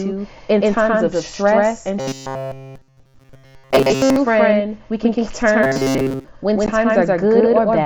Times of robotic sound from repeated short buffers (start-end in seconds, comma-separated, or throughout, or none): 2.00-4.18, 5.63-6.29